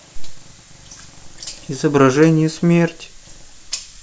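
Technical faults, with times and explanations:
No technical faults found anywhere in the speech recording.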